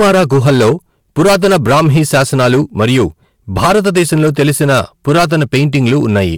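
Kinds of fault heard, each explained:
Hard clipping: the speech is driven about 13 dB beyond what a stage in the chain can pass, so its peaks are sliced flat throughout. Roughly a tenth of the samples sit at the limit, and those squared-off tops add high harmonics heard as harsh fuzz on every loud syllable.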